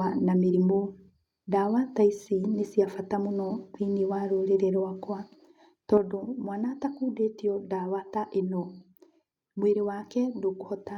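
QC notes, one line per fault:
5.98–10.97 s, one channel drops out: level falls abruptly by about 6 dB to the end, likely a lost stereo channel; waveform envelope halves, spectrogram dims uniformly.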